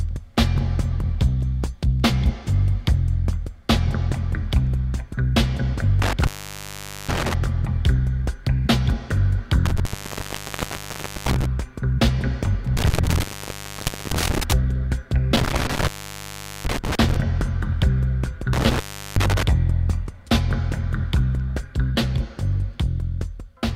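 Intermittent contact breaks the signal at 6.02, 9.66, 12.77, 15.36 and 18.53 s, opening for 0.82, 1.41, 0.89, 0.77 and 0.37 s as a loose connection parts. Crackle marks each break's edges and faint hiss fills the gap, unlike a clean digital dropout.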